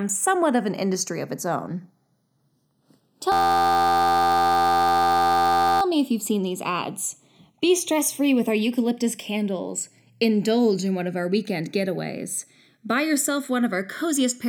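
Throughout the speech, the channels drift apart: separate clocks, off by a few tens of ppm, slide the inter-channel delay toward a millisecond, giving slow flanging in mono.

From 3.32 to 5.82 s, a system hang loop repeats an 11.61 ms fragment, fitting a 512-sample buffer, as a steady 86.1 Hz buzz before "me if you've seen".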